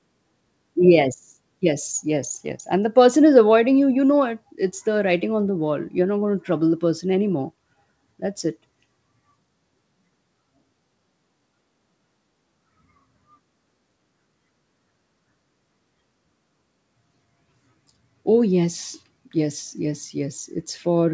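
Nothing in the speech needs fixing: it has the band limit of a wideband call path, with no content above 8 kHz, which fits a G.722 codec at 64 kbps, and nothing else stands out.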